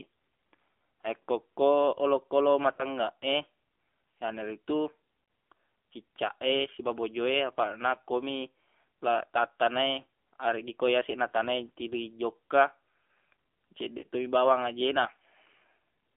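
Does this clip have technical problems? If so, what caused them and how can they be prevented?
Yes. The AMR narrowband mobile codec runs through the whole speech clip. The band sits between about 250 Hz and 3.5 kHz, so the sound is thin and muffled with no air above that. The codec rebuilds the voice from a vocal-tract model and a few excitation pulses per frame, and its damage is plainly audible as a buzzy, synthetic edge. That fits a low mode around 7.4 kbps. A wideband or higher-rate call path would prevent it.

Lost AMR speech frames interrupt the voice at 2.74 to 2.85 s, 5.24 to 5.28 s and 13.98 to 14.06 s. Each gap of about 40 ms fits two consecutive 20 ms frames being dropped after radio errors. The decoder fills each gap by repeating the last good pitch and spectral settings at falling gain, which produces a brief dip and warble before the voice resumes. Better radio coverage or stronger channel error protection would prevent these losses.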